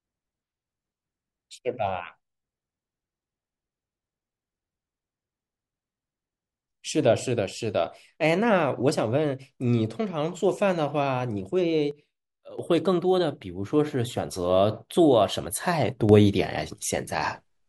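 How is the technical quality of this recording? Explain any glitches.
The speech has two sudden gain jumps. At 11.91 s the level drops about 9 dB until 12.59 s, and at 16.09 s it rises about 6 dB through the end. Speech and background step together, likely from digital gain applied without a ramp.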